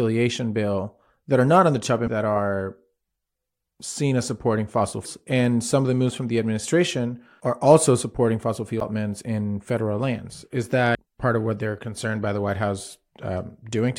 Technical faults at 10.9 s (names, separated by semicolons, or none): damaged data in a compressed stream